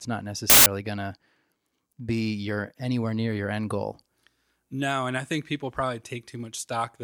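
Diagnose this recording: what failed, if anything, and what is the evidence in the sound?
The failure sits in sample-format conversion: for a stretch from 0.50 to 0.66 s, samples built from the wrong bytes replace the speech. When the reader misassembles each sample, through a byte offset, swapped byte order or the wrong alignment, the rapidly varying low-order bits land in the high-order position. The result is a burst of loud, harsh broadband noise lasting about 0.16 s.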